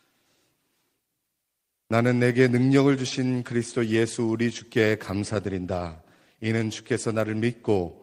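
No technical faults are audible.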